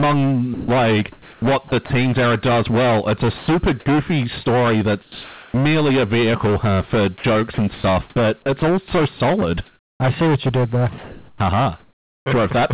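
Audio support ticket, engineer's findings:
Hard clipping throughout: harsh fuzz on every loud syllable, overdrive about 19 dB, nearly a third of samples flattened. Waveform shows squared-off tops; spectrogram shows harmonic smear up to the 4 kHz ceiling of the G.711 call band.

Sound chopped by the voice detector, 0.54–1.9 s, 7.18–10.0 s (after "a vehicle huh for", before "I see what you"), 10.98–12.26 s (after "what you did there"): likely VAD toggling, with 520 ms, 600 ms and 880 ms of comfort noise. Spectrogram shows alternating speech and flat noise patches.

Sound dropped by the voice detector, 3.38–3.48 s, 4.44–4.46 s, 5.02–5.54 s (before "a vehicle huh for"): likely VAD gating, with speech replaced by comfort noise. Waveform shows flat low-level noise blocks where speech energy should be.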